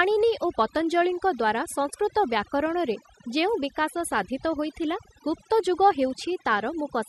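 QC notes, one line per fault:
throughout, overdone noise removal: bands near the noise floor are pulled down hard, leaving near-silent gaps with twinkling specks.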